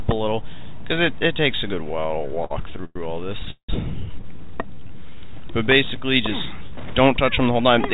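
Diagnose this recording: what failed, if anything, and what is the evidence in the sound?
At the converter, the sample clock is unstable by roughly half a microsecond rms, so samples land slightly early or late throughout. The timing error tracks the waveform's slope, adding a faint roughness about 50 dB below the signal that grows on loud, bright passages and disappears in silence.

In the network and jitter buffer, repeated stalls (stutter) occurred from 1.84 to 2.97 s: late packets drained the buffer again and again. The receiver stretched the last sound across 13 short waits, the longest 110 ms, so about a quarter of that stretch is filler and the audio stutters while losing nothing.

From 3.51 to 3.71 s there is a call audio freeze: the sound hangs and fades for about 180 ms, including roughly 90 ms of silence, then resumes exactly where it stopped. The likely cause is packets held up in the network, which emptied the buffer and added that much delay.

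The jitter buffer slow-down runs from 4.37 to 5.16 s. Running low, the buffer rebuilt its reserve by repeating single pitch periods and bits of pauses, inserting about 130 ms. Playback drops to 85% speed at unchanged pitch, so sounds are drawn out.

The jitter buffer speed-up runs from 7.11 to 7.88 s. Holding more audio than it needed, the buffer trimmed short pitch-period pieces, roughly 70 ms in all, to cut delay. The audio runs at 108% speed at the same pitch and sounds hurried, over a G.711 call path with nothing above 4 kHz.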